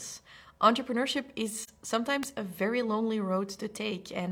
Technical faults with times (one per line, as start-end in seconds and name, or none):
1.61-1.69 AAC frame loss with muting
2.23 electrical switching spike